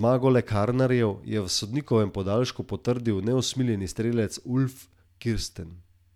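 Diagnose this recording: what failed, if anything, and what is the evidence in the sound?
Nothing failed: the speech signal arrives intact at every stage from capture to playback, with no audible break, distortion or corruption anywhere in the recording.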